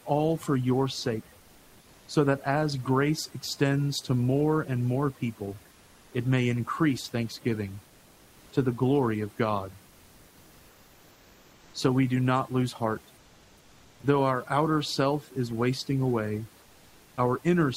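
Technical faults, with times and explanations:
Throughout: overdone noise removal. The noise reduction is set too hard for this recording. Frequency bands near the tool's noise estimate are pushed far down or shut off, and the quiet parts of the speech are removed with them. Between phrases the background drops and breaks up into small twinkling specks. The room noise that survives sits about 31 dB below the speech.
7.87 to 8.51 s, 13.17 to 14.03 s, 16.61 to 17.17 s: comfort noise in place of the background. These gaps last 640, 860 and 560 ms. In each one the real background gives way to a steady, featureless hiss, about 2 to 3 dB quieter than the background around it. The likely cause is discontinuous transmission in the codec, as in Opus DTX. The sender stops sending when it hears no speech, and the receiver fills the pause with synthetic noise shaped roughly like the background.
14.01 to 14.03 s: onset clipped by the voice detector. 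At the end of the second comfort noise gap, the speech returns abruptly and without its soft beginning. About 20 ms of the start are missing. The likely cause is that the sender's voice detector was slow to notice that sound had resumed. Those first moments were never sent, and the receiver played comfort noise in their place, so the speech appears to switch on suddenly.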